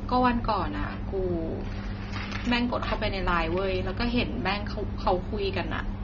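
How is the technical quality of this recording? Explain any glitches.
The quality is noticeably degraded for the whole clip. The speech sounds dull and smeared, with nothing above 6.9 kHz, and sibilants and held sounds carry a fizzy, warbling texture. This is likely AAC compression at a low bitrate, which the sound suggests is around 24 kbps. To fit that budget, the AAC-LC encoder has dropped the top of the spectrum and coarsely quantised what remains, leaving gaps that shimmer as each frame changes.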